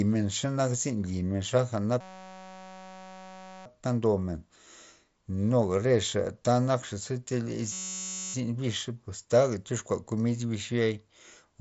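A system hang loop occurs from 2.01 to 3.66 s and again from 7.72 to 8.34 s. A 5.33 ms slice, consistent with a 256-sample buffer, repeats as a steady 188 Hz buzz in place of the speech, heard through the mSBC headset path's roughly 7.7 kHz bandwidth.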